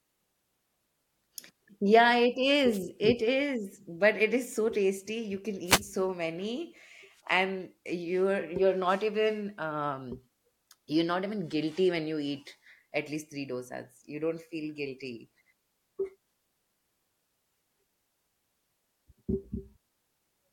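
Speech with two wireless microphone noise hits, at 2.72 to 2.79 s and at 5.66 to 5.82 s, the second just before "so many and you're". Each is a brief swish of static laid over the voice as the FM radio link fades and receiver noise surges. Unlike a digital wireless dropout, which mutes or chops the sound, these hits are heard as a rush of hiss.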